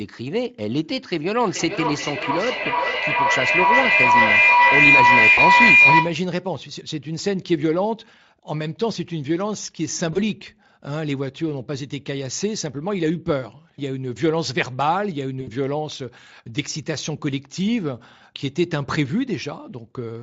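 From 1.41 to 6.28 s a feedback howl builds up: two devices in the same room are on the call, and the path from microphone to loudspeaker and back adds level on each pass. The repeats narrow to a tone around 2 kHz, pulsing roughly every 0.4 s with the loop delay. At its loudest it sits about 9 dB above the speech, and it stops when the loop is broken.

Within the howl, at 2.63 to 2.68 s, comes the first instance of VoIP packet loss concealed by the speech codec. The dropout fits one missing 20 ms frame. A second follows at 5.33 to 5.41 s, about 40 ms, consistent with two frames. Later ones fall at 10.13 to 10.19 s, again one frame, and at 15.41 to 15.49 s, about 60 ms, which fits three frames. In each, the Speex decoder, whose regular coding leaves little or no audible damage, extends the last pitch and filter at falling gain. The gap sounds like a short buzzy or noise-like smear that fades, and the sound stays thin for tens of milliseconds after packets resume.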